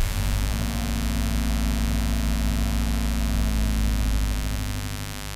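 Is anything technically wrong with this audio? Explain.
Yes. A mains buzz runs through the whole clip, from start to finish. Somewhere in the signal chain, a dimmer, a rectifier or a poorly shielded cable is coupling switching spikes from the 50 Hz supply into the audio, twice per cycle. Those sharp pulses carry a dense stack of harmonics up into the kilohertz range. What you hear is a steady, raspy buzz rather than a pure hum, sitting fairly high, at about 10 dB below the sounds in the recording.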